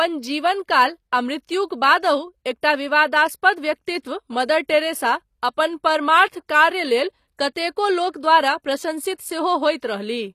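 Throughout, the speech has plainly audible HE-AAC compression, likely from a stream near 24 kbps: rebuilt treble turns s sounds gritty, with nothing above 14.9 kHz.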